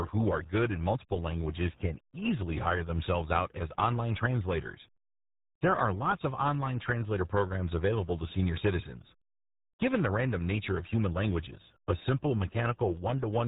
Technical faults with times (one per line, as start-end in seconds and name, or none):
0.00-13.48 RealAudio 14.4 codec